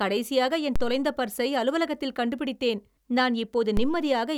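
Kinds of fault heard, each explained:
DC step: The waveform's zero line suddenly jumps, by about -16 dBFS. It happens twice, at 0.76 s and 3.77 s. Each jump gives a low thump under the speech. The offset then drains away, decaying as a 2 Hz high-pass would let it, over a few tenths of a second.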